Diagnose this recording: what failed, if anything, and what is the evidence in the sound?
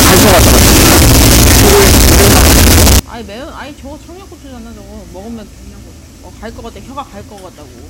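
From 0.0 to 2.99 s the sound turns into a loud, harsh, near-square waveform at an almost fixed, high level, with background noise brought up as loud as the main sound. The likely failure is at sample-format conversion: float read as integer, where 32-bit float samples were interpreted as 32-bit integers, so sign and exponent bits set the level. Plain clipping would instead flatten only the peaks and leave quiet passages quiet.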